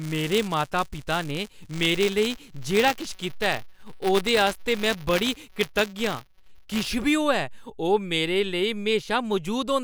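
Buffer tearing from 0.0 to 6.89 s: writer and reader cross each period, splicing a small slice of audio about 20 ms old into every buffer. The result is a rattling 188 Hz buzz over the speech, which fits a 256-sample buffer.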